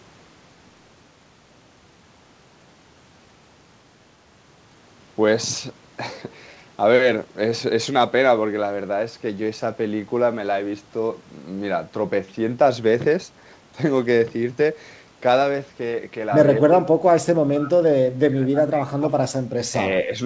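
From 16.61 to 19.12 s the speech sinks and breaks up, at worst by about 25 dB. Brief dips follow at 19.68–19.77 s and 20.06–20.11 s. This is likely speech suppressed in double talk, with the echo canceller ducking the talker.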